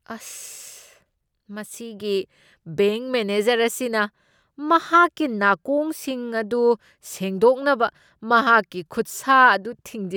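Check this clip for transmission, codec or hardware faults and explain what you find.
Nothing turned up on a listen: the speech comes across with no transmission, codec or hardware faults to point to.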